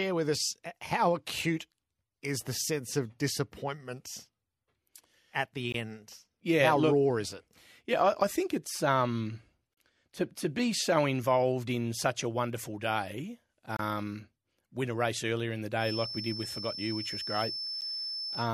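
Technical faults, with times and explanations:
5.72 s, 9.74 to 9.77 s, 13.77 to 13.79 s and 17.81 s, gap between stream segments: the time stamps of consecutive 4-second segments don't quite meet, and the player fills each shortfall with silence of about 20, 35, 26 and 11 ms. Each is a hard-edged dropout in the speech, one between "I think it's um" and "to to be so", another right after "such a wonderful day". They recur at roughly 4-second intervals. Nothing is lost; the gaps only add time.
15.76 s to the end, feedback whistle: the loudspeaker-to-microphone loop is likely sitting right at the edge of feedback, so a single 5.3 kHz tone keeps ringing without building into a runaway howl. It enters just after "race earlier in the" and stays under the speech as a thin, steady whistle about 10 dB below it, its level swelling and fading slowly while the feedback loop hovers near the point of instability.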